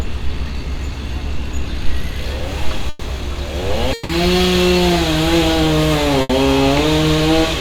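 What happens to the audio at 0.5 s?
Nothing goes wrong at 0.5 s: the sound plays through that moment cleanly and without interruption.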